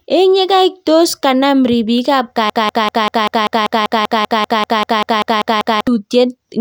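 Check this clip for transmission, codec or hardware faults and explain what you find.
One fault is present in this speech clip.

Broken-record loop, 2.50 to 5.87 s: just after "tos kanam ripik ap", a fragment of about 195 ms repeats back to back 17 times. The stream likely stalled and kept resending its last held piece, so the speech due in that span is lost.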